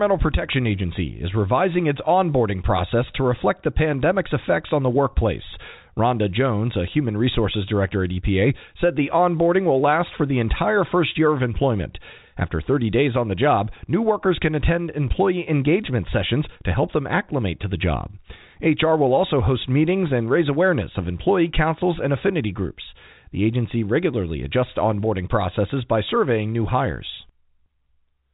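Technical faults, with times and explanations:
No technical faults are heard; the speech comes over a G.711 telephone path that works as intended, passing nothing above about 3.8 kHz.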